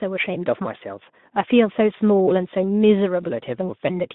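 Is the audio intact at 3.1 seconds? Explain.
Yes, the speech at 3.1 seconds is intact, with no fault at that moment.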